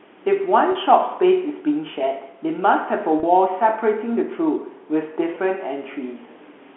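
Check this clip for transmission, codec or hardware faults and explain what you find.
Speech over a G.711 telephone line shows packet loss with pitch repetition in three places: 0.72 to 0.75 s and 3.20 to 3.23 s (30 ms each, consistent with three lost 10 ms packets), then 5.35 s (10 ms). The receiver loops the last pitch period, so each gap sounds briefly held and buzzy.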